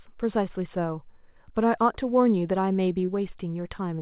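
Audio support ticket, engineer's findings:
Brief smear at 3.06 to 3.10 s: short concealed packet loss. About 20 ms arrived late, and the receiver extended the preceding sound before blending back, over audio band-limited below 4 kHz.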